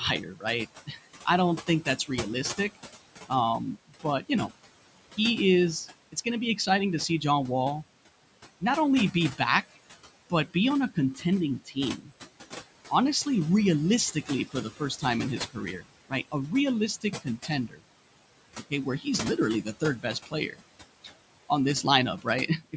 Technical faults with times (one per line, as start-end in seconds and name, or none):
0.00-22.76 noise suppressor artifacts
0.23-7.22 speech cut by the noise suppressor
8.61-22.74 speech cut by the noise suppressor